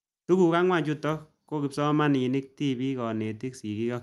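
No faults can be heard in the speech, which comes through a WebRTC call path whose Opus coding leaves its usual coding noise and a top end that stops at 12 kHz.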